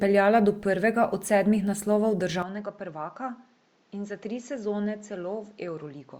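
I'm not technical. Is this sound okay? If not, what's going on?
No. From 2.42 s, right after "prvega od sedmih naslovov", the speech turns duller, quieter and gains a faint new hiss until the end. That points to an input switched to a poorer device, likely another microphone. Unlike a simple tone filter, the loudness and background noise change too.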